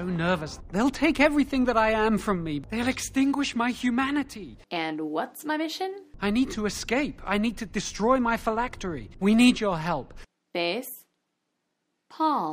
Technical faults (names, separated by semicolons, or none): none